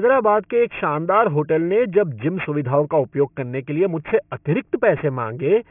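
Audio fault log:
Throughout: aliasing. The speech was dropped to a 6 kHz rate unfiltered, so everything above 3 kHz folds back down, leaving sibilants gritty and metallic, with the folded junk only about 20 dB under the voice.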